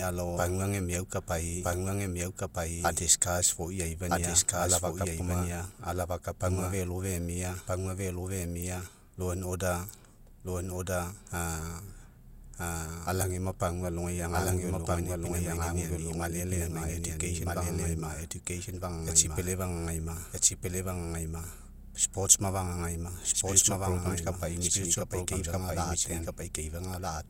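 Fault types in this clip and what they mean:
Doubled audio track: a second full-band copy of the speech runs through the whole clip about one and a half seconds behind the original, at roughly the same level. That long offset makes each phrase return as a distinct repeat rather than an echo. The copy has no decay tail or room colouring, just a clean duplicate. The likely cause is the signal being captured twice, once through a slower path, or an edit that left two misaligned copies.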